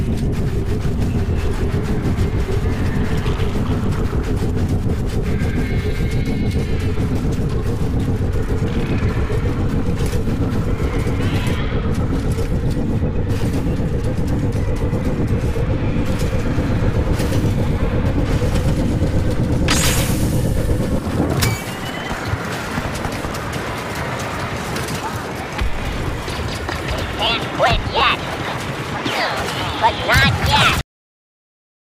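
From about 16.57 s to 20.99 s the audio picks up a doubled audio track: a second full-band copy trails the original by around 150 ms, sitting roughly 5 dB down. It's dry, with no decay or room colour, so it reads as a flat slapback, and it switches on and off abruptly at both edges. The likely cause is the signal being captured a second time through a slower path and mixed back in. Then there's a cut-off end at 30.81 s. The audio stops dead in the middle of a sound and drops straight to digital silence with no tail, which is what you get when the final buffers never make it out to the file or the output.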